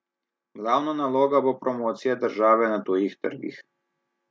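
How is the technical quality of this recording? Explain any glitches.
The recording has one clear fault, a slow upward level drift, heard through call microphone processing whose band stops at 8 kHz.

From 0.58 s to 2.93 s there is automatic gain rising. The gain control judged the input too quiet and kept turning it up, adding about 10 dB over more than two seconds. The speech grows steadily louder, and the background noise floor swells with it. That shared swell marks it as gain control rather than a speaker leaning closer, which would lift the voice but leave the room noise where it was.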